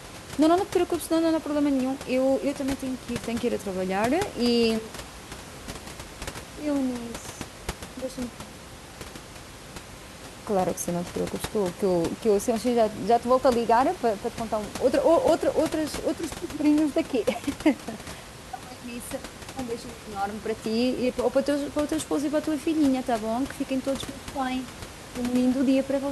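No technical faults can be heard anywhere in this speech recording, with the only background being the room's own ambient noise sitting about 15 dB below the speech.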